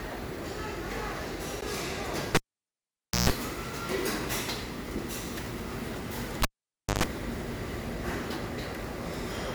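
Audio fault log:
1.61 s, block of digital silence: the output buffer likely went unfilled for about 12 ms and was zeroed, so the sound gives a brief tick or dip at the hard edges.
2.35–3.30 s, cable pulled and plugged in: a live cable was yanked, giving a pop, about 0.9 s of near silence, a 141 ms burst of 60 Hz mains buzz as the tip touched, then a second pop on reconnection.
6.42–7.04 s, cable pulled and plugged in: the connection broke again, with a pop, about 0.56 s of near silence, a 125 ms burst of 50 Hz buzz from partial contact, and a closing pop.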